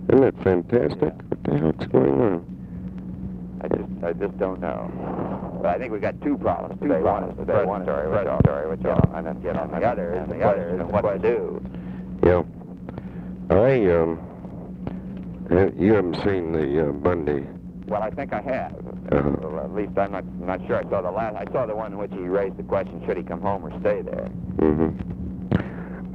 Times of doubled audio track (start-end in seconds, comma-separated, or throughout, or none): 6.82-11.24